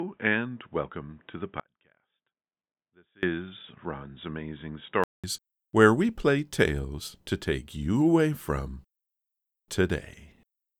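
From the very start up to about 5.24 s, the audio sounds dull and boxy, with nothing above 3.8 kHz, a little quieter than what follows, and carrying its own faint background noise. Then there's a 200 ms silence and the sound opens back up. That pattern most likely means the input had been switched to a poorer device, something like a headset in call mode, before the system went back to the proper microphone.

Inside that stretch, at 1.60 s, the sound cuts out abruptly and doesn't come back until 3.23 s, a gap of about 1.63 s. It isn't truly silent: a faint leak of the sound sits far below the normal level throughout. That's an audio dropout to a faint residue, likely the wanted signal going missing while the path after the break stayed live. The hard edges are what set it apart from a natural pause or a fade.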